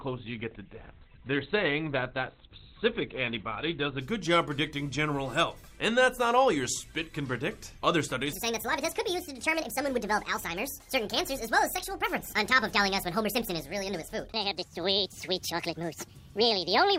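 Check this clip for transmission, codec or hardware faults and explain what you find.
Two faults stand out: a low-quality opening that clears up suddenly, and a long final stretch played too fast.

The adaptive stream starts at a low bitrate from 0.0 to 4.0 s. The player began on a cheap version of the stream so playback could start at once, then switched to a better one after gauging the connection. During that opening nothing is heard above 4.5 kHz, and the coding artefacts are stronger, which fits Opus at around 12 kbit/s. At 4.0 s the treble returns abruptly without any gap, consistent with a step up to roughly 64 kbit/s.

A section plays at the wrong speed from 8.33 s to the end. Everything runs 1.59 times faster than it should, so the audio sounds hurried and sits about seven semitones higher, with pitch and tempo shifting together at the instant the section begins. The likely cause is an editor or player treating that portion as if it had been recorded on a different clock, reading its samples back too quickly.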